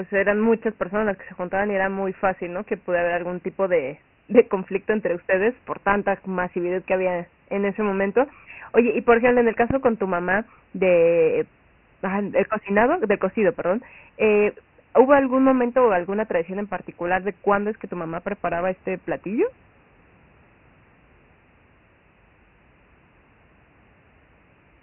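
Speech recorded through Dialogic VOX ADPCM, the 4-bit telephony codec used for phone menus and voicemail, with heavy damage throughout. Nothing is present above 3 kHz, and the 24 kbps rate points to 6,000 samples a second at 4 bits each. The coarse step-size adaptation leaves a gritty hiss that rides along with the voice and swells with it. On a spectrogram the energy stops at a flat ceiling at 3 kHz, with a granular noise haze filling the gaps between speech harmonics. Three loud pops, in two events, interrupt the audio. Between 9.70 and 9.88 s, after "por ejemplo en el" and before "tu mamá de ah", a double pop lands well above the speech level, at roughly 15 dB. A single, milder pop at 15.19 to 15.21 s, just before "momento o alguna tradición", rises only a little above the voice. The speech continues underneath both. These are likely voltage transients from a connector, switch or static discharge. 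On the waveform they show as sharp spikes jutting past the speech envelope, and on a spectrogram as thin vertical stripes spanning the whole band.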